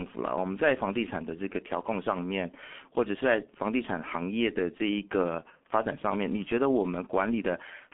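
Muffled, hoarse speech runs through the whole recording, with consonants smeared together and nothing audible above about 3.6 kHz. These are the marks of the G.723.1 codec, an early internet-telephony coder. It confines the signal to a telephone band of roughly 200 Hz to 3.4 kHz and rebuilds the voice from a coarse model updated only every 30 ms frame, so rapid articulation blurs. The heavy damage fits its 6.3 kbit/s mode.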